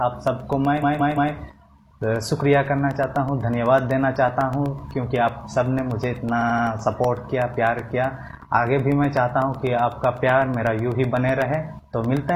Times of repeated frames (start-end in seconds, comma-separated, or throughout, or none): 0.79-1.30, 6.38-6.63